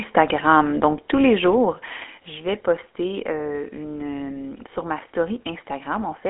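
A speech clip carried over a GSM full-rate codec, with plainly audible buzzy, gravelly roughness from the pulse-excited vocal-tract model, which fits a 13 kbit/s full-rate coder. The line band runs roughly 250 Hz to 3.4 kHz, and nothing is present above 3.8 kHz. At 1.02 s the whole signal, speech and background alike, drops by about 4 dB in a single step, likely a microphone volume stepped down by the call software's automatic input-level control.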